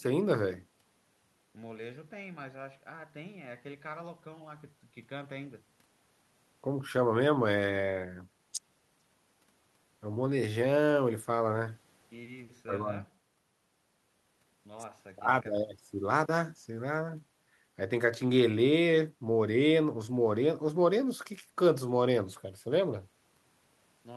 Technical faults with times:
none

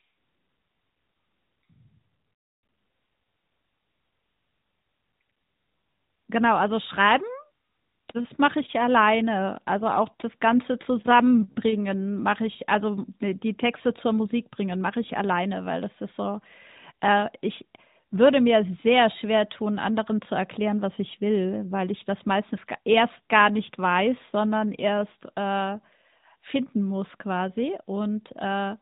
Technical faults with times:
none

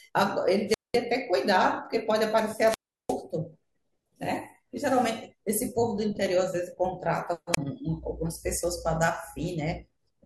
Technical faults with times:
0.67-0.99 wireless microphone squelch dropout
2.66-3.16 wireless microphone squelch dropout
7.52-7.58 wireless microphone squelch dropout

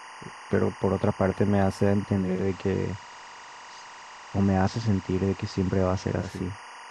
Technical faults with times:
0.00-6.90 timecode bleed
2.08-6.55 digital radio blending to analogue

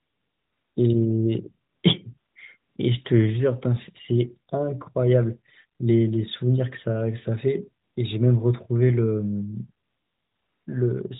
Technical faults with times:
0.00-0.76 AMR comfort noise
1.70-1.84 AMR comfort noise
2.18-2.76 AMR comfort noise
7.84-7.96 AMR comfort noise
9.86-10.66 AMR comfort noise

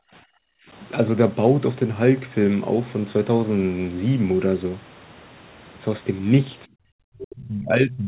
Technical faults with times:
0.00-0.67 background gated by the echo canceller
6.66-8.07 speech suppressed in double talk

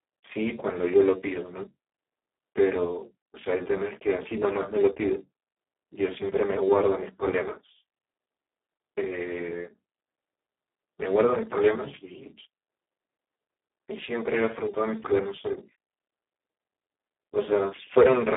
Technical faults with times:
0.00-18.36 Speex codec

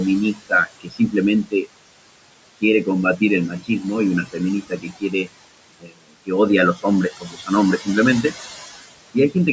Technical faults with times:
0.00-9.53 noise suppressor artifacts
0.34-1.66 speech cut by the noise suppressor
3.18-3.69 speech cut by the noise suppressor
4.26-5.29 speech cut by the noise suppressor
5.80-6.30 speech cut by the noise suppressor
6.75-7.88 speech cut by the noise suppressor

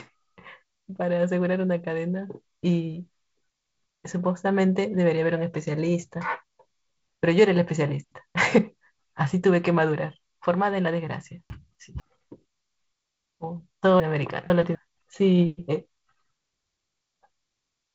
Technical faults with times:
3.50-4.00 chunks out of order
11.50-12.00 chunks out of order
14.00-14.75 chunks out of order

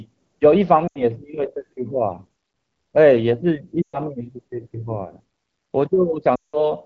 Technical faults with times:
0.87-1.02 lost AMR speech frames
3.81-3.99 lost AMR speech frames
6.35-6.71 lost AMR speech frames

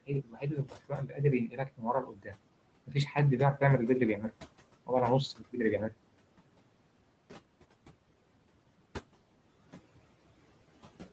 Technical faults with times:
0.00-11.13 noise suppressor artifacts
0.02-1.21 speech cut by the noise suppressor
1.47-2.40 speech cut by the noise suppressor
2.86-3.17 speech cut by the noise suppressor
4.16-4.36 speech cut by the noise suppressor
5.38-5.94 speech cut by the noise suppressor

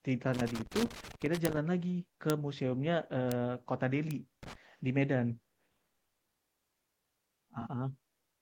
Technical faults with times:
0.34-1.57 loose connector crackle
1.45 bit error spike
2.30 bit error spike
3.32 bit error spike
4.11 bit error spike
4.43-4.55 loose connector crackle
7.61-7.68 AAC frame loss with concealment

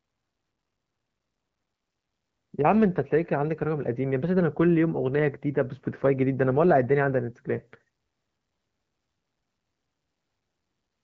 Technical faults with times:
none

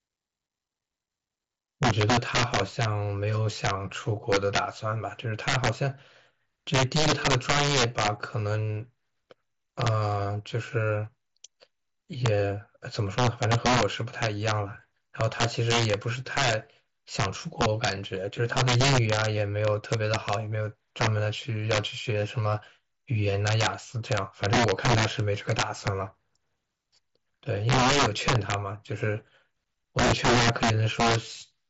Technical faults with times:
0.00-31.70 integer overflow

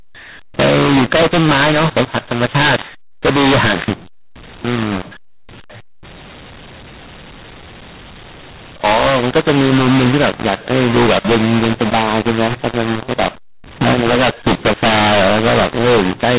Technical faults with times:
0.00-16.38 mu-law and A-law mixed up

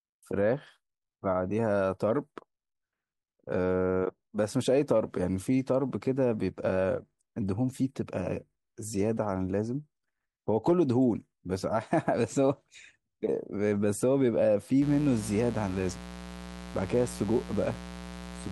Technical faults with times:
14.82-18.52 mains buzz

